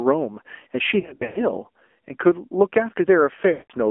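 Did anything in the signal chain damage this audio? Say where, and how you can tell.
Yes. The damage sits at the codec stage. The speech is band-limited to roughly 250 Hz to 3.4 kHz. It sounds buzzy and synthetic throughout. That fits the AMR narrowband mobile codec at a low rate, around 7.4 kbps. Its vocal-tract model cannot carry fine detail.

The network stage adds lost AMR speech frames. From 1.00 to 1.45 s, dropouts total 240 ms, scattered over 360 ms. The longest run is 100 ms. Another 180 ms of dropouts falls between 3.52 and 3.73 s. Each time the sound smears, fades, then returns rough. The decoder reused its last good settings with falling gain.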